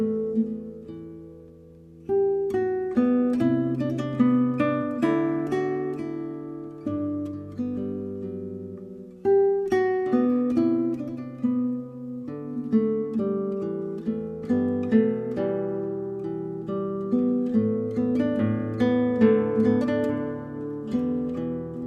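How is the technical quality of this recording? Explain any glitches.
Nothing stood out on listening; no glitches were heard anywhere in the recording.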